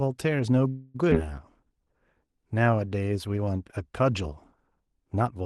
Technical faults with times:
0.69-0.96 call audio freeze
1.10-1.13 skip ahead
1.64-2.90 jitter buffer slow-down

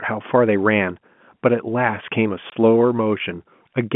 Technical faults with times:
2.50-2.52 packet loss filled with silence

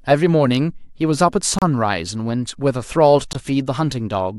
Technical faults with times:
1.58-1.62 Bluetooth stall
3.33-3.35 Bluetooth stall

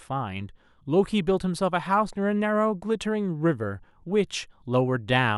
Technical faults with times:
none

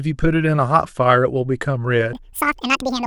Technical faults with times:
2.13-3.06 audio read two samples at a time (double speed)

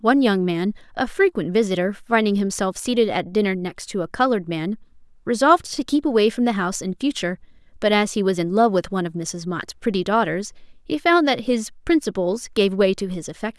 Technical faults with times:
none

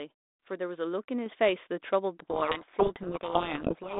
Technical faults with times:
1.26 microphone volume stepped up
2.22-4.00 codec payload misread

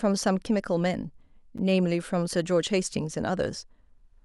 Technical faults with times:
1.58 block of digital silence

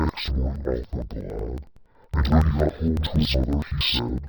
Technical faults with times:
0.00-4.28 interleaved audio read as planar

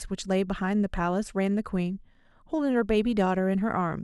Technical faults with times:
none

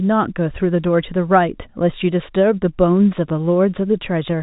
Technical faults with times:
none

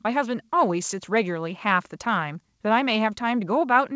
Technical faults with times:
none

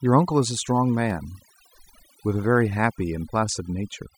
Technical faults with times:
0.00-4.18 overdone noise removal
0.91-1.29 CD scratch ticks

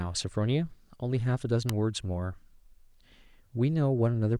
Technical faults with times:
1.69 electrical switching spike

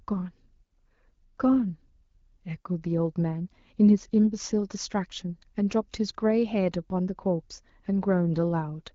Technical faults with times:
none

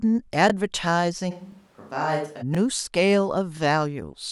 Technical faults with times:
0.50-0.52 overlapping chunks
1.32-2.41 switch to a distant microphone
1.52-1.55 overlapping chunks
2.55-2.57 overlapping chunks
3.57-3.60 overlapping chunks

